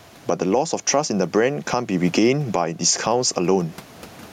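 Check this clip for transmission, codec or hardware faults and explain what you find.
The speech shows gain pumping from start to finish. The gain swings by about 15 dB. Loud and quiet passages sit unnaturally close in level, giving a squashed, pressed-together sound. The likely cause is microphone gain set far too high, with a fast limiter or compressor clamping it down on every loud syllable and releasing it in the pauses. The room noise sits about 38 dB below the speech.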